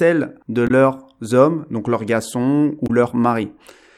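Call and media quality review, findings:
Damaged data in a compressed stream at 0.67–0.71 s and 2.86–2.91 s: brief glitches of about 40 ms in the speech. Corrupted compressed frames are misread by the decoder, which loses sync and resumes at the next valid frame header.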